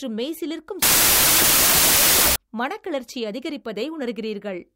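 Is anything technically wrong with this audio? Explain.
Yes. From 0.82 to 2.36 s there is a wrong sample width fault. Packed 24-bit samples are read as 32-bit words, so values straddle mismatched bytes. Loud hiss buries the speech, which runs 1.33 times fast and raised in pitch. The waveform swells, and the spectrogram shows dense broadband noise over faint, upward-shifted harmonics.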